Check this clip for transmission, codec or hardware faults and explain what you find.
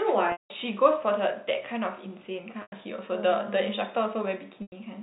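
Packet loss with pitch repetition is present, in three places. It happens from 0.32 to 0.50 s, from 2.62 to 2.72 s, and from 4.62 to 4.72 s. The first gap lasts 180 ms. The other two last 100 ms each, which fits 20 ms packets. The receiver bridged each gap by repeating the last pitch period of the speech, then fading it out. The result is a held, buzzy tone. In the longer first gap it dies toward silence before the speech cross-fades back. The G.711 telephone band is audible throughout, capped at 4 kHz.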